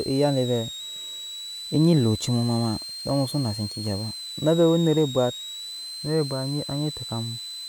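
From start to finish there's a switching supply whistle sitting under the speech, a thin high tone around 4 kHz that wanders between roughly 3.7 and 4.3 kHz. It's fairly prominent, only about 15 dB down from the speech. What you're hearing is a switch-mode power supply dropping into an audible burst mode, or beating against another supply, and its frequency shifting as the load changes.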